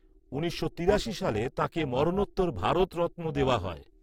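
From start to finish, the speech carries overlap-add ripple. The frames were rejoined with an overlap that doesn't sum to a steady gain, so the level pumps up and down by about 11 dB, around 300 times a second, giving a metallic buzz with extra tones around the voice.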